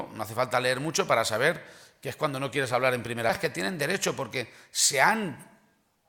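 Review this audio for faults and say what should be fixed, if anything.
There's one fault, at 3.29 s: the audio jumps abruptly forward with a short blip, so the flow breaks and picks up somewhere further along. That's most likely a stream segment skipped. One chunk of the segmented stream didn't load, and the player went straight on to the next one, dropping whatever that segment held instead of waiting for it. So what needs fixing is that hole in the programme. To prevent it, have the player retry or buffer a failed segment before moving on, rather than skipping past it.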